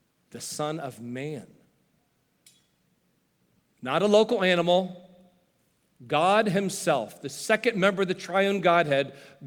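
No technical faults can be heard anywhere in the recording, which keeps a steady, continuous signal throughout.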